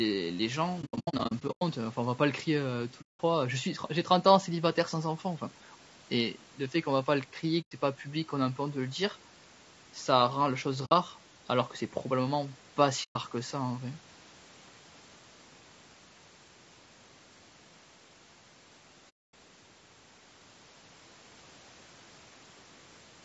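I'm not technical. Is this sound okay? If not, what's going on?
No. All the way through, the speech sounds rough and grainy, with a fuzzy, hiss-like texture around it and a thin, artificial sheen at the top. That is the sound of low-delay AAC compression, the kind used to keep video calls responsive. It chops the sound into very short slices, and with little data to spend on each one, fine detail gets smeared into noise. Here that is likely AAC-ELD, squeezed fairly hard.

The sound also drops out six times. There is a stuttering patch between 0.81 and 1.62 s, made of several short gaps of up to about a tenth of a second each, then single holes at 3.01 s (0.19 s long), 7.62 s (0.11 s), 10.85 s (0.07 s), 13.03 s (0.13 s) and 19.09 s (0.25 s). This is AAC frame loss with muting: pieces of the transmission went missing, and the player filled them with silence, fading out and back in, so the gaps have soft edges.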